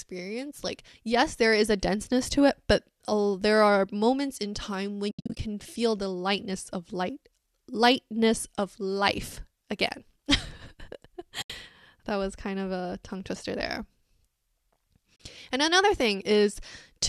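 AAC frame loss with muting first breaks the speech between 5.11 and 5.39 s, after "are moments in time" and before "feel the lightness of." About 220 ms of that 280 ms stretch goes silent in several short holes, none much longer than a tenth of a second. The decoder zeroes each lost frame's spectrum, and the overlapping windows fade the sound out and back in over roughly one frame. This gives soft-edged dropouts rather than clicks. The short frame length likely comes from low-delay AAC. Shorter single gaps follow at 11.42 to 11.50 s (80 ms) and 15.16 to 15.20 s (40 ms). On a spectrogram each gap is a blank vertical strip across all frequencies. On the waveform the envelope tapers briefly into flat silence.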